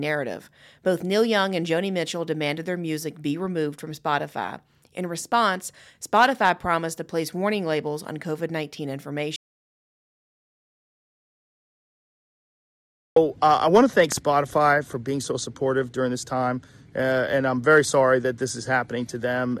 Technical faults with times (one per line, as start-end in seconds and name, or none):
9.36-13.16 audio dropout to silence
14.12-14.20 loud pop